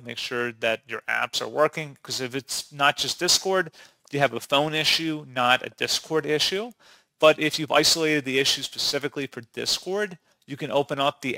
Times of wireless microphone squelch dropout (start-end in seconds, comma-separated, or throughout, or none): none